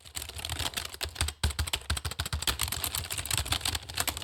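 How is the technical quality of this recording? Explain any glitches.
Nothing to flag here, since there are no glitches, dropouts or other technical faults anywhere in this recording of sounds.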